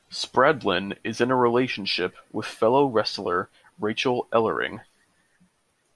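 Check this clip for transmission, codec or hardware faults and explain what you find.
Nothing faulty can be heard in this speech recording.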